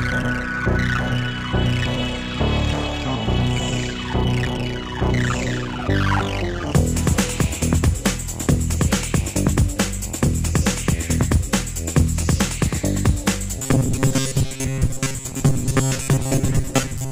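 Robotic sound from repeated short buffers runs from 13.59 s to 17.11 s, where the audio collapses into a rigid, metallic buzz near 134 Hz. The likely cause is a stalled stream being filled by looping a segment of about 7.5 ms, replacing roughly 70 percent of the sound.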